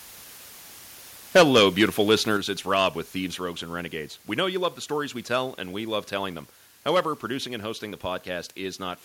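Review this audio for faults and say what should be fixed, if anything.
Low bit depth with dither runs through the entire clip as a constant, even hiss with no distortion riding on the signal. Before the audio was rounded to a small number of levels, dither was added. That turns the rounding error into steady white noise instead of distortion that follows the signal. The hiss sits about 25 dB below the signal, which fits a word length of about 7 bits. To prevent it, keep the capture and processing chain at 16 bits or more throughout.

Microphone overload occurs from 1.35 to 1.83 s, where peaks go over by about 4 dB and roughly 7% of samples are clipped, and again from 2.11 to 2.14 s, about 2 dB over with roughly 4% clipped. In both spans the tops of the loudest peaks are cut off, which gives them a crackling edge. The likely cause is a microphone input volume set high enough that the converter hit its limit. 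To prevent it, lower the input gain so the loudest peaks keep some headroom.

Microphone volume stepped down at 1.37 s by about 2 dB and at 2.37 s by about 5 dB. At each point the sound and the background drop in level together, suddenly, in a single step. The first step falls inside the first overload, and the second comes shortly after the second overload. That pattern points to call software that likely detected the clipping and cut the device's input volume at once. To prevent it, set a correct fixed input level and disable automatic microphone gain adjustment.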